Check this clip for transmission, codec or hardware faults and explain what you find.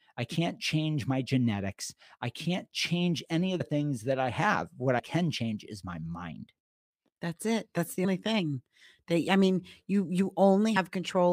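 One fault type recurs here: compressed frames skipped, at 3.59 s (between "can't change any of" and "things that I have"), 4.98 s (before "can change is my"), 8.04 s (before "thing I mean you") and 10.75 s. Whole compressed frames go unplayed, dropping about 70, 50, 150 and 70 ms of speech. Those gaps match two to five frames of roughly 26 ms each. Because neighbouring frames overlap, each jump lands as a brief smeared blip rather than a hard click.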